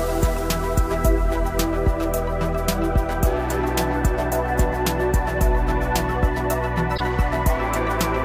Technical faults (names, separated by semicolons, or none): damaged data in a compressed stream